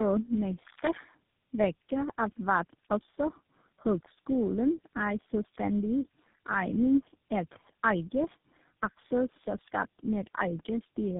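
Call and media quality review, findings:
Tandem speech coding, whole clip. Speech rough, muffled and warbly, nothing above 3.7 kHz. Consistent with three narrowband speech codecs in series, ending in GSM full rate. Each stage decodes and re-encodes the previous stage's artefacts, compounding the damage.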